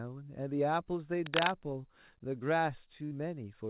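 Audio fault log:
1.26–1.53 s, cable scratch noise: a dense, uneven scratching and rustling sits over the speech, roughly 5 dB louder than it. This is likely a worn cable, connector or control being moved, so its contact resistance jumps about rapidly and injects bursts of noise.
3.05–3.14 s, burst of packet loss: the sound is held and fades for about 58 ms, then the speech resumes with roughly 60 ms missing. Consecutive packets were lost or arrived too late, so the receiver stretched the last sound while turning it down before skipping ahead.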